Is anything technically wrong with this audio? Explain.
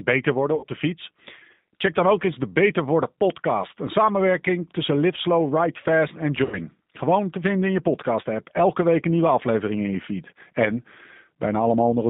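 Yes. Throughout, the speech passes through the G.729 codec at 8 kbit/s, which resynthesises it from a vocal-tract filter, pitch predictor and sparse pulses. The result is a plainly rough, synthetic quality inside a 150 Hz to 3.7 kHz band, unlike simple band-limiting, which stays clean.

VoIP packet loss concealed by the speech codec occurs twice: at 0.55 to 0.65 s, between "beter worden" and "de fiets", and at 6.44 to 6.63 s. Each loses about 80 ms, which fits four 20 ms packets. The decoder extrapolates from its last pitch and filter at falling gain, so the gap becomes a fading buzzy tone or coloured noise rather than the abrupt silence of a dropout.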